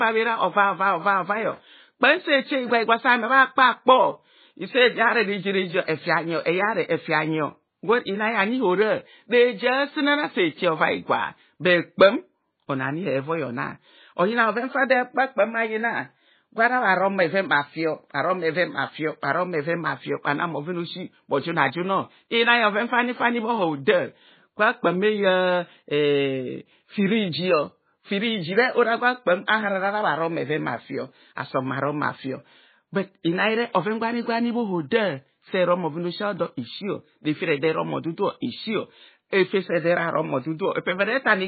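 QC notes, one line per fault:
throughout: MP3 compression, heavy damage; nothing above 4.5 kHz, and weak frequency lines flicker between frames, sounding watery, likely from starved encoding around 16 kbps.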